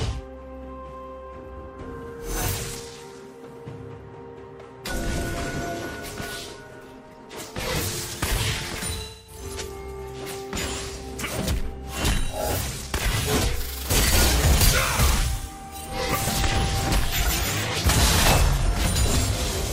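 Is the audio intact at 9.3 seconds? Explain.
No. AAC frame loss with concealment runs from 8.95 to 9.42 s: the decoder rebuilds about 256 ms from the last good spectrum, giving a smeared, phasey patch rather than a clean dropout's hard silence.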